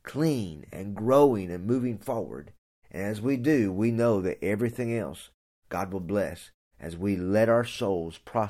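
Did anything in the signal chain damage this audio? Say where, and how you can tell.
No, nothing in the signal chain damaged this audio.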